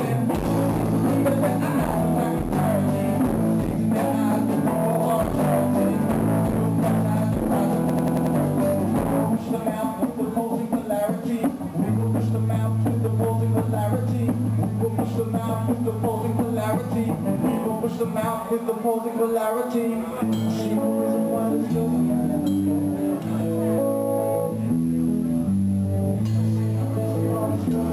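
From 7.90 to 8.36 s, a system hang loop: playback froze while the hardware replayed one 93 ms slice, fitting a 4096-sample buffer, five times, a 10.8 Hz machine-gun stutter. The waveform shows five identical blocks, the spectrogram repeating stripes; about half a second is lost.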